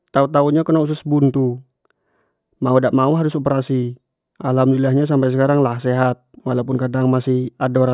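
Nothing goes wrong anywhere in this speech recording, so there are no faults to walk through.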